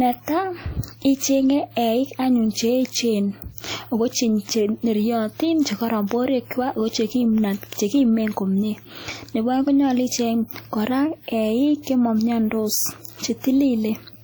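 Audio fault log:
throughout: ringing, washy speech whose hiss breathes with it, likely WMA compression near 48 kbps; the spectrogram shows smeared blocks and holes where weak components vanish.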